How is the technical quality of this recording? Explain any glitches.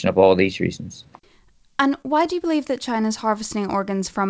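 The recording carries one audible glitch, heard through a call-codec path whose bandwidth stops at 8 kHz, which fits G.722 at 64 kbps. At about 2.02 to 2.06 s, just before "do you believe that", there is a short concealed packet loss. Roughly 20 ms of audio arrived too late to decode. The receiver bridged the hole by extending the preceding sound and then crossfaded back into the real signal. The result is a brief smear or wobble rather than a silent gap. That continuation, instead of an abrupt dropout or a hard click, is what sets it apart from an unconcealed loss.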